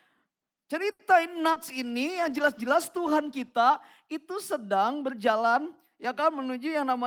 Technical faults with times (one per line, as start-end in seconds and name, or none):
0.91-1.02 short stall from a late packet
1.35-3.62 call bitrate drop
1.52-1.59 short concealed packet loss
6.49-7.06 jitter buffer speed-up